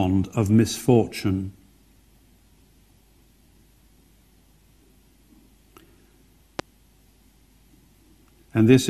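A loud pop at 6.59 to 6.62 s stands about 10 dB above the surrounding audio, likely a brief voltage pulse, from a plug, switch or static discharge, entering the signal path.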